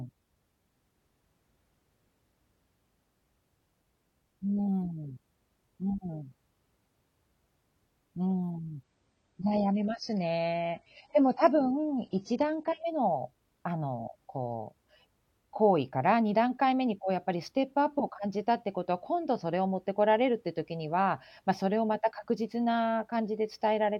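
From 8.83 to 12.83 s the speech drops to an adaptive stream at a lower bitrate: nothing above 9.2 kHz, thicker codec artefacts, quality consistent with a much leaner encode. Unlike packet loss, the switch is abrupt in both directions with no gap or stutter.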